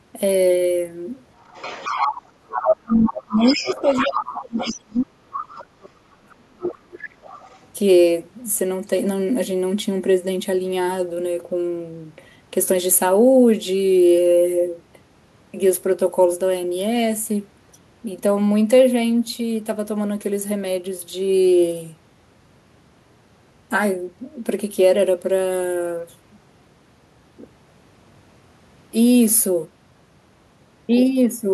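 From 1.4 to 2.63 s, then 3.06 to 4.78, 5.31 to 5.63 and 6.3 to 7.66 s, the other side's voice leaks through. A second, separate voice sits roughly 10 to 25 dB under the speech, fading across the four stretches. This is likely residual loudspeaker echo. Overlapping this, from 2.36 to 7.05 s, the talker's speech is suppressed in double talk, dipping by as much as roughly 35 dB. Unlike a dropout, the dips likely follow the far voice.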